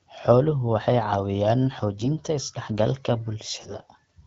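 AMR bit errors appear at 1.99 to 2.17 s and 3.60 to 3.82 s. Corrupted low-priority bits misplace excitation pulses and skew fine pitch, gain and spectral values. Pitch and level hold, but the speech turns hoarse and gargly, with a higher bit error rate in the second burst, about 7% against 5%.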